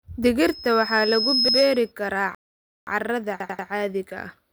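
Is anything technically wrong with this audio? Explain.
Yes, this speech clip has three kinds of fault.

From 0.43 s to 1.92 s there is loudspeaker feedback squeal. A microphone was picking up the loudspeaker it was driving, and at 5.2 kHz the loop gain rose above one, so that frequency kept recirculating and growing on its own. It is heard as a thin, high tone that swells over roughly a second until it sits about 5 dB above the speech, then stops at 1.92 s.

At 1.49 to 1.58 s, and again at 3.40 to 3.68 s, there is a repeated buffer. Fresh audio didn't reach the output device in time, so it replayed the last chunk it held. Each chunk lasts about 93 ms, which fits a 4096-sample buffer. The first event plays the chunk twice in total, and the second plays it four times. Each repeat starts with a hard join, so the sound stutters rather than dropping out.

From 2.35 s to 2.87 s there is a rebuffering stall. 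The player ran out of downloaded audio and paused until more arrived. The sound cuts to silence and then carries on exactly where it stopped. Nothing is skipped, but about 0.52 s of dead air is added to the clip.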